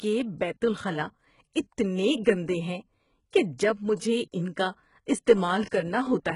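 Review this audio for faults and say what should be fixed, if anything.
The speech carries heavy HE-AAC compression damage throughout, likely from that codec at a very low bitrate, which fits roughly 12 kbps. Nothing survives above 11.1 kHz. The treble there is rebuilt from lower bands, so s sounds turn gritty and metallic. Encoding at a higher bitrate, or with plain AAC, would prevent it.

Pre-echo appears twice. The first is at 1.53 to 1.56 s, just after "بیت الخلا". The second is at 5.69 to 5.72 s. Coding noise spreads about 23 to 25 ms ahead of each sharp attack, so a short hiss precedes it and blurs its onset. A codec with block switching, or more bits, would prevent it.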